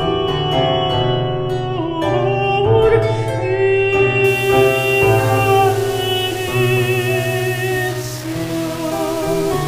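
Low bit depth without dither from 4.24 s onward: a grainy distortion follows the sound, roughly 15 dB below it, likely from rounding to 5 bits.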